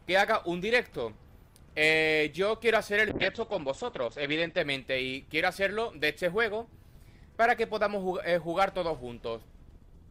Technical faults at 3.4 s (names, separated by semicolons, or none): call bitrate drop